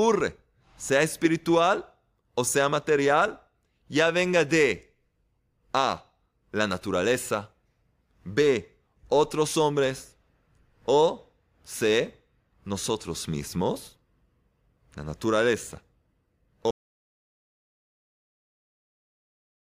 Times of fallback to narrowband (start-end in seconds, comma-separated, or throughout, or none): none